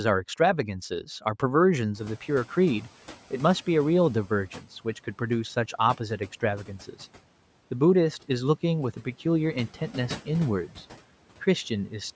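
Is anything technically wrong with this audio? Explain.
Yes. From 1.94 to 2.91 s the speech shows the noise suppressor catching up. Background noise jumps by about 25 dB around 2 s, and the suppressor's noise estimate trails that rise. The new noise comes through with less reduction at first, then sinks by about 9 dB over roughly a second as the estimate adapts. On a spectrogram, the broadband noise floor appears bright at the jump and fades across that window. The waveform's floor visibly shrinks.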